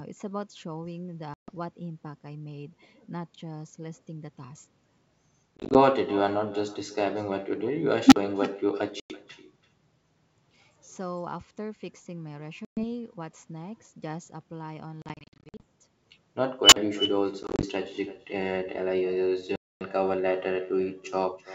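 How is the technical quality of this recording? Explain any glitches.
The recording has three kinds of fault: a constant echo, repeated dropouts, and two brief runaway tones. The G.722 wideband coding carrying it sounds clean.

Echo with no canceller runs through the whole clip. The far end's loudspeaker feeds its microphone, and nothing subtracts that path, so the talker's speech returns after a round trip of roughly 300 ms. Every phrase is trailed by a copy about 16 dB quieter and thinner, which gives the speech a hollow doubled tail.

Packet loss on an ADPCM call occurs at 1.34–1.51 s, 5.57–5.80 s, 9.00–9.19 s, 12.65–12.84 s, 15.02–15.63 s, 17.43–17.66 s and 19.56–19.81 s. Lost packets are replaced by silence, and afterward the decoder's predictor and step size no longer match the sender's. Each gap has hard edges, and the speech returns slightly distorted before settling. The losses at 1.34, 9.00, 12.65 and 19.56 s are solid holes of 100–250 ms. 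At 5.57, 15.02 and 17.43 s the loss is scattered into short bursts of 20–50 ms, which makes the sound stutter. The stretch at 15.02 s is the worst, with 340 ms missing across nearly 0.6 s.

An unstable filter fires twice. A recursive filter received bad coefficients and its output grew without limit until it overflowed and reset. At 8.07–8.16 s a tone near 300 Hz swells over about 50 ms into a loud, clipped hum. At 16.64–16.76 s a squeal near 3 kHz builds over about 80 ms. Each one ends in roughly 43 ms of silence.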